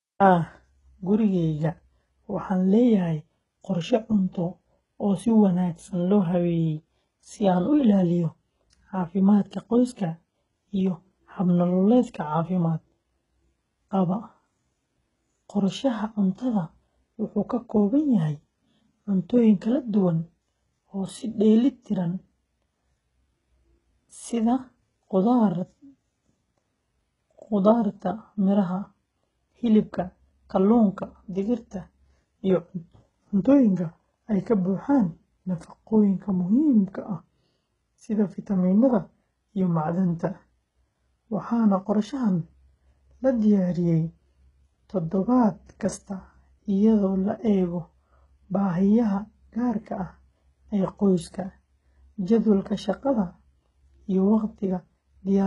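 From start to finish the speech carries heavy HE-AAC compression damage, likely the culprit here. The top end, which stops at 11.1 kHz, is copied up from lower bands rather than coded, so s sounds come out gritty and lispy, which fits a very low bitrate around 12 kbps.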